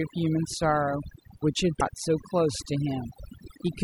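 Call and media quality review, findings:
Quiet speech detail gone along with the noise; background dropped, breaking up into twinkling specks. Overdone noise removal: suppressor set too strong, driving individual frequency bands down or off whenever they sit near its noise estimate.

Brief glitch at 1.79–1.82 s: audio skips ahead, with a short chirp, noise burst or gap right after the jump. Likely a broken MP3 bit reservoir: dropped frames leave the next frame reading another frame's bytes, a span that fits one 24 ms frame.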